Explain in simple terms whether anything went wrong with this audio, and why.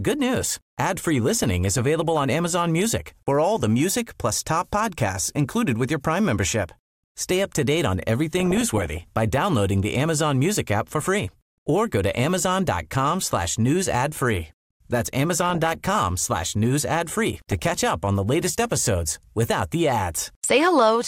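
Something did go wrong: DAB burbling, four short bursts at 1.36 to 2.17 s, 8.40 to 9.01 s (after "up to date on"), 15.41 to 15.99 s, and 17.38 to 17.93 s (before "on the latest episodes"). Weak digital radio reception let errors slip into the audio data, so slices of the sound jump around, giving short blips of noise over the speech.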